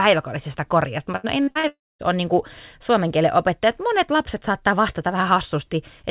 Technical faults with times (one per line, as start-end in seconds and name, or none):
1.16-1.66 repeated packet loss (robotic sound)
1.67-2.02 long network dropout